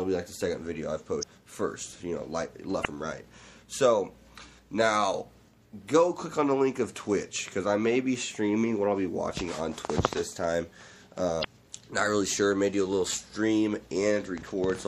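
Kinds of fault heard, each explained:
MP3 compression: Throughout, the sound is watery and swirly, with smeared attacks and a dulled top end. This is likely from MP3 encoding at a bitrate consistent with about 64 kbps, where the encoder drops the treble and lets weak frequency components flicker between frames.
Damaged data in a compressed stream: At 1.19–1.24 s, 2.81–2.86 s and 11.41–11.45 s, brief glitches occur. Corrupted bytes in the encoded stream make the decoder misread those frames, lose sync and skip ahead to the next valid frame header.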